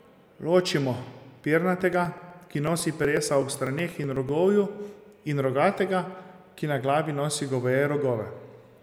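From 1.81 s to 4.29 s the speech carries periodic USB or driver dropouts: about a millisecond of audio is skipped every 0.124 s, roughly twenty times, as the driver stalls. The result is steady ticking, unlike random clicks, whose spacing never repeats.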